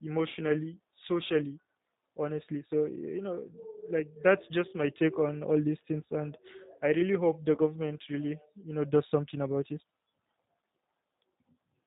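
Speech, coded throughout with G.729 (the A variant). Nothing above 4 kHz survives, so the sound is muffled. The vocal tract filter and sparse pulse excitation leave speech plainly rough and synthetic. This fits the codec's 8 kbit/s rate.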